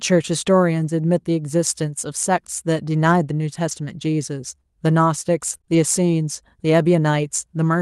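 At 0.81 to 0.87 s, and again at 3.71 to 3.73 s, there is a lost packet rebuilt from error correction. Each lost packet's content arrived as a low-bitrate copy inside the following packet, and the decoder played that copy. About 40 ms is patched at the first spot and 20 ms at the second. Neither leaves a silence. Instead the sound turns briefly rougher and noisier. The waveform stays continuous, and on a spectrogram each patch shows as a short smeared, grainier column with blurred harmonic detail.

From 5.53 to 5.75 s comes repeated packet loss, heard as a robotic sound. Three separate holes fall within this stretch, the longest 22 ms. Each is bridged by extending the preceding sound, and the next hole follows before the rhythm recovers. Roughly a quarter of the span, around 57 ms, is concealed. It comes across as choppy. On a spectrogram the harmonics turn flat and comb-like, repeating in short blocks. 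The waveform shows stuttering, near-identical cycles.

The whole clip carries the coding texture of the Opus call path, with content stopping near 12 kHz. The call ran at a bitrate of 40 kbps.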